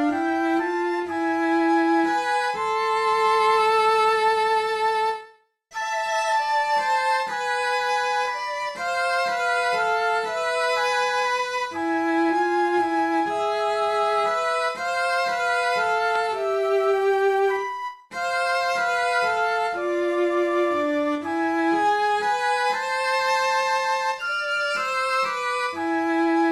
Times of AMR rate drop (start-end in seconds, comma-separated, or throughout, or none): none